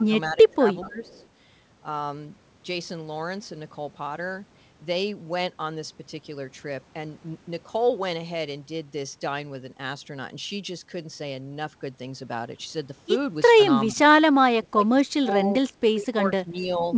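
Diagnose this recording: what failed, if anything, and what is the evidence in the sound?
Echo leak, at the call-processing stage. A faint delayed copy of the speech surfaces at 0.00 to 0.04 s, 0.49 to 0.55 s and 1.06 to 1.26 s. It trails the original by 421 ms and sits roughly 35 dB below it. The likely cause is a far-end loudspeaker feeding its own microphone, with the echo canceller leaving a residue that was sent back. The scraps are short, under the 8 kHz ceiling of the G.722 call path.

Speech suppressed in double talk, also at the call-processing stage. The speech dips repeatedly where both sides overlap. It drops across most of 0.00 to 1.24 s, briefly at 13.54 to 13.59 s and 13.88 to 14.00 s, then heavily at 14.58 to 15.53 s and 15.93 to 16.87 s. The deepest dips reach about 25 dB. The likely mechanism is the echo canceller treating the local talker as echo and attenuating both together.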